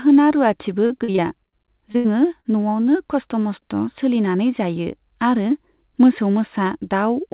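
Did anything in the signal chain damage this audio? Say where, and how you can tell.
Yes. The damage is at the network stage, where the repeated packet loss (robotic sound) runs from 0.86 to 1.54 s. Six gaps, the longest 40 ms, were patched by extending the last pitch period. On a spectrogram this appears as choppy, frozen harmonic blocks, and the waveform shows copied cycles with abrupt seams.

Two instances of short concealed packet loss occur at 1.92–1.96 s (about 20 ms missing) and 2.40–2.46 s (40 ms). Each sounds like a brief smear or wobble. In the spectrogram the harmonics stop evolving for a moment, and the waveform repeats a cycle before crossfading back into real audio.

A burst of packet loss follows immediately, from 1.96 to 2.06 s, with 80 ms lost. The decoder held the last sound and faded it. The spectrogram shows flat, fading energy below the call path's 4 kHz ceiling, consistent with 64 kbps G.711. 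The waveform shows a decaying envelope before the audio jumps ahead.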